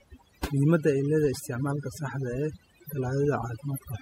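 A speech clip with two faults running throughout. Mains buzz sits under the whole recording. It is a steady, raspy buzz built on 50 Hz. Sharp switching spikes arrive twice per mains cycle, so harmonics climb well into the kilohertz range. It lies about 30 dB below the speech. Overdone noise removal is also audible from start to finish. The background in the gaps between phrases drops and breaks up into twinkling specks. Frequency bands near the noise floor are pulled down hard, taking quiet parts of the voice with them.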